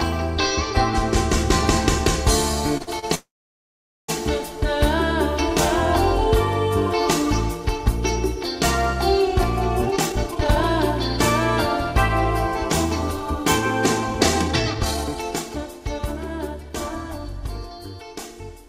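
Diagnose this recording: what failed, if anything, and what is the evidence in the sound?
Short stalls from a late packet at 2.77–2.82, 2.82–2.89 and 2.99–3.05 s: at the network stage, the jitter buffer emptied and sound was held 29, 48 and 34 ms.

Call audio freeze from 3.15 to 4.10 s: the sound holds, then goes silent for 0.82 s, adding about 0.94 s. It was likely caused by network-delayed packets emptying the jitter buffer.

Jitter buffer speed-up at 9.82–10.64 s (155%), 14.15–16.00 s (124%) and 16.47–17.87 s (109%): the buffer repeatedly cut pitch periods, roughly half a second twice and about 0.15 s, so the audio runs hurried at unchanged pitch.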